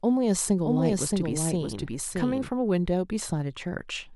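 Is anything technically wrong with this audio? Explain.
Yes. From 0.64 s to 2.48 s there is a doubled audio track. A second, full-band copy of the speech trails the original by roughly 0.7 s, about 5 dB quieter. It has no decay or room colour. It starts and stops abruptly. A slower second capture path is the likely cause.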